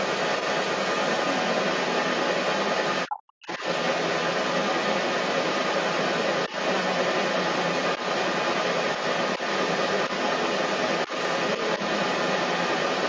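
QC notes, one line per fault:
Throughout, other side's voice leaking through: a second voice runs under the talker for the whole clip, roughly 10 dB louder than the speech itself. This is likely residual loudspeaker echo the canceller failed to remove. Unlike a bystander in the room, it tracks the far end of the call.
3.08 to 3.48 s, speech suppressed in double talk: the talker's voice plunges by around 40 dB for about 0.4 s while the far side is also talking. The canceller likely mistook the talker for echo and muted both. Unlike a packet dropout, the dip coincides with overlapping speech.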